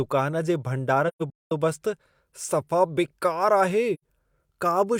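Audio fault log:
1.08–1.52 s: AAC frame loss with muting. The speech drops out in soft-edged gaps, roughly 0.34 s missing across 0.43 s, the longest run around a fifth of a second. That fits about eight lost frames zeroed by the decoder, with overlapping windows fading each gap in and out.
3.94–4.03 s: AAC frame loss with muting again, a shorter gentle hole of about 85 ms, which points to two lost frames.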